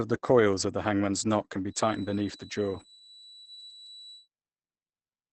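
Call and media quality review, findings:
Muffled, hoarse, rough speech throughout, nothing above 8.8 kHz; likely Opus compression in SILK speech mode, heavy damage consistent with about 12 kbps wideband. Not MP3: hoarse rather than swirly.

Thin steady 3.9 kHz tone from 1.66 to 4.29 s, starting after "the hangman's knot can", swelling and fading slowly, roughly 25 dB under speech; likely feedback whistle, loop at the edge of oscillation without runaway.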